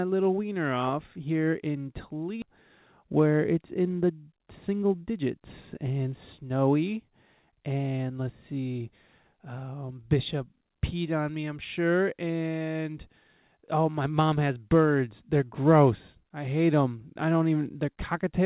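At 2.42 s, just after "wiener off here in", a skip ahead drops roughly 0.4 s of speech, and the two sides are joined with no silence. On the waveform the envelope changes abruptly at the join. On the spectrogram a formant track breaks off and a different one starts immediately.

From 4.35 to 5.27 s, after "where it's in the" and before "and snowy", a jitter buffer speed-up plays the speech at about 111% of normal speed, removing roughly a tenth of a second through repeated cuts of one or a few pitch periods. The pitch stays the same, but the speech sounds rushed. The spectrogram shows compressed syllable spacing with a steady harmonic spacing, and nothing in the telephone-band G.711 path appears above 4 kHz.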